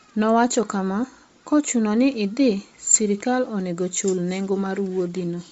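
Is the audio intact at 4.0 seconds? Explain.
No, at 4.0 s you're hearing what's likely Bluetooth LC3 compression across the whole clip. The speech is cut off above 7.7 kHz, with a breathy, grainy noise-fill edge from a low-bitrate setting around 32 kbps.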